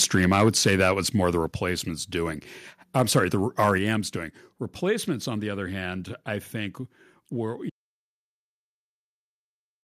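From the start of the clip to 0.91 s, just before "was more the", the speech shows microphone overload. The peaks are driven about 5 dB past the converter's limit, and a small share of samples is flattened at that limit. The clipped tops give the loudest syllables a harsh, crackly edge. The likely cause is microphone input volume set too high for this talker.

Within that passage, at 0.48 s, comes the first microphone volume stepped down: a sudden level drop of about 2 dB. A second, larger step of about 4 dB follows at 1.47 s, right after "was more the". Voice and background fall together in a single instant, with no fade. This is likely the call software cutting the device's input gain after sensing the distorted peaks.

Overload returns briefly from 3.6 to 3.69 s, about 4 dB over, with roughly 3 percent of samples clipped, so the crackle is denser here despite the shorter span. At 3.78 s, a third step down of about 5 dB follows almost immediately, again lowering speech and room sound together.

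At 7.70 s, straight after "hand I think were", the audio dropout to silence begins and runs to the end of the clip. The signal cuts out mid-flow to silence, with no room tone, and whatever followed is lost. The input stream was probably interrupted by a disconnect, a failed link or a mute while the recorder kept writing silence.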